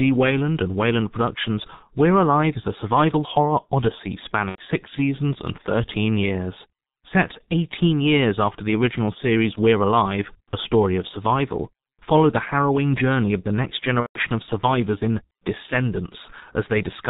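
The speech is muffled and hoarse from start to finish, with blurred consonants and nothing audible above 4 kHz. This is heavy G.723.1 codec damage: the low-rate telephony coder, at a bitrate that sounds like roughly 6.3 kbit/s, works in 30 ms frames and updates its model of the voice slowly, so fine detail and fast changes are smeared.

From 4.49 to 4.61 s the speech turns into a stretched, buzzy tone or coloured noise that fades, and it stays weak for a moment after real audio returns. The same thing happens for longer, from 14.00 to 14.19 s. Both are VoIP packet loss concealed by the speech codec. About 90 ms went missing in the first gap, which fits three 30 ms frames, and about 150 ms in the second, which fits five. The decoder filled each gap by repeating its last pitch and filter with falling gain. Because each frame builds on the one before it, the distortion carries on briefly after the packets resume.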